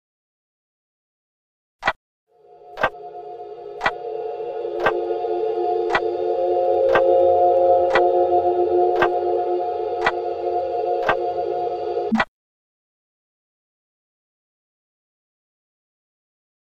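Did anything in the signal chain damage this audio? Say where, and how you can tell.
No, nothing in the chain from capture through playback leaves an audible mark of damage on this audio.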